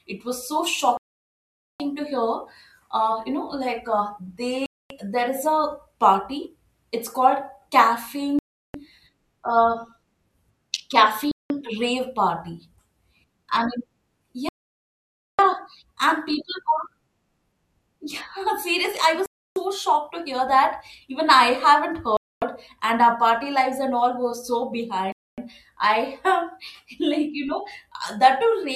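A wireless link that likely kept losing packets to interference, leaving the headphone buffer empty until resends arrived, has put eight Bluetooth stalls into this speech clip. Each is a hard cut to silence before the speech resumes: at 0.97 s just after "was so" (about 0.8 s), 4.66 s, 8.39 s, 11.31 s, 14.49 s (about 0.9 s, the longest), 19.26 s, 22.17 s just before "and our party lives", and 25.12 s between "and all were so" and "I have".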